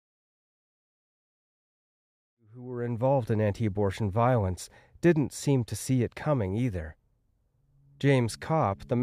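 Listening through this speech recording, nothing stood out as a technical problem.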